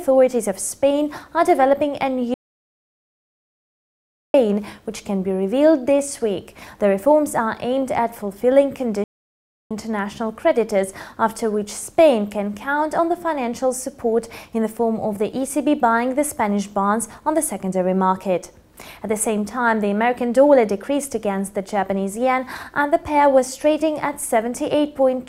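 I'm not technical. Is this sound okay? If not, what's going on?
No. The sound cuts out and goes silent from 2.34 to 4.34 seconds, then again from 9.04 to 9.71 seconds, before carrying on. This is a playback stall: the player likely ran short of data or got held up, and paused until it caught up.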